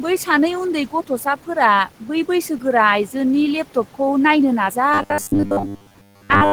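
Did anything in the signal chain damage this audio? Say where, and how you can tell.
Yes. Noise suppressor artifacts from the call-processing stage run through the whole clip. The room noise, sitting about 18 dB below the speech, is pulled down by about 12 dB in the gaps and comes back up underneath the speech. It tracks the level of the talker rather than staying steady, and that is what gives it away. The suppressor works frame by frame on the bands it judges to be noise.

From 4.94 s to 6.52 s, right after "लेपटपखौ नायनो", the speech turns into a rigid metallic buzz pitched at 100 Hz while still loosely following the syllables. That is robotic sound from repeated short buffers, likely at the driver or buffer stage. When fresh audio arrives too late, the same short block is replayed in place of the missing signal. A 100 Hz buzz fits a block of about 10 ms, and most of this stretch is repeated material rather than new audio.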